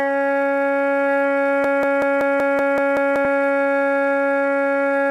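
A stall in the player, encoder or stream likely left it resending its last held fragment, producing a broken-record loop in this music clip: from 1.64 to 3.25 s a 189 ms piece repeats exactly eight times back to back, and the music meant for that stretch is lost.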